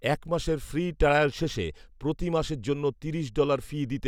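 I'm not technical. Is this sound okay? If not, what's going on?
Yes, nothing wrong can be heard anywhere in this recording.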